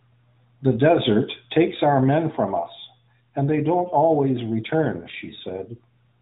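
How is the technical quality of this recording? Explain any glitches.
No glitches or faults audible.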